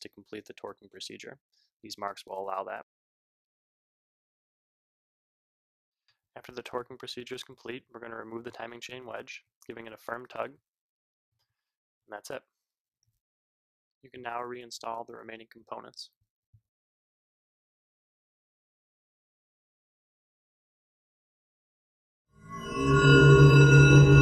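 From 2.83 s to 6.08 s the audio collapses by about 31 dB when heard in mono, leaving only a faint residue. That points to one channel inverted: the likely cause is one stereo channel flipped in polarity, so everything common to both sides cancels on summing. Unlike a dropout, the sound doesn't vanish completely. Everything common to both channels nearly disappears, background included, and only the small mismatch between them is left.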